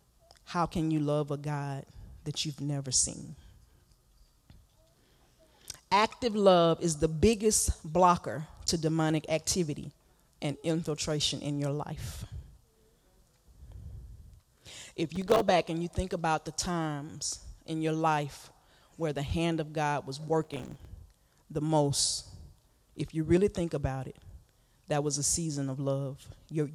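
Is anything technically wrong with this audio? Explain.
Yes. There are two bursts of processor overload crackle, from 15.16 to 15.41 s (just before "back and you think") and from 20.41 to 20.85 s. Here the processor kept missing the deadlines for its very short audio buffers, a few milliseconds each, about 20 times in the first stretch and about 40 in the second. Each missed buffer drops to silence with hard edges. The rapid run of tiny dropouts is heard as a gritty, tearing crackle over the speech that stops when the load clears.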